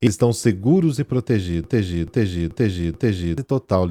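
A short speech recording with two faults. At 0.07 s, just before "estão seguros e", damaged data in a compressed stream makes the decoder lose sync and resync on a later frame; a spectrogram shows a thin broadband smear. After "estão seguros e", from 1.64 to 3.38 s, a broken-record loop repeats a 0.43 s fragment four times, likely from a stalled stream resending its last buffer; the waveform shows identical blocks tiled back to back, and the audio meant for that span is missing.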